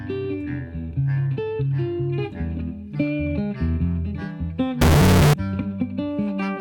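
From 4.81 to 5.33 s the sound turns into a harsh, blaring, nearly square wave sitting at an almost fixed, high level, the signature of float read as integer. This most likely comes from 32-bit float samples being interpreted as 32-bit integers, so sign and exponent bits dictate level. Unlike ordinary clipping, quiet background becomes as loud as the main sound, while its pitch still remains traceable.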